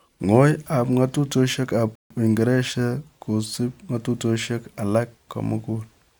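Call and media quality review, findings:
Rebuffering stall, 1.95 to 2.10 s. Speech cuts to silence for 150 ms, then resumes exactly where it stopped, with nothing skipped. Probable component: client playback buffer. Mechanism: the player drained its downloaded audio, halted until more data arrived, then continued. No content lost; the pause adds 150 ms to the timeline.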